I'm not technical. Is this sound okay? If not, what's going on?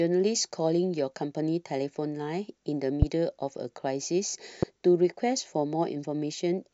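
No, there are two loud pops in this speech, one at 3.02 to 3.05 seconds and a softer one at 4.63 to 4.65 seconds. Each is a sharp click laid over the talking, which carries on underneath. They're likely from an electrical jolt, like a plug, switch or static spark.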